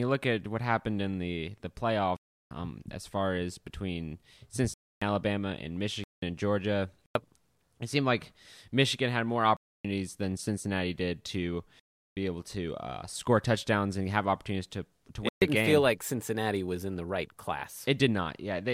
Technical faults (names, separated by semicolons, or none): block of digital silence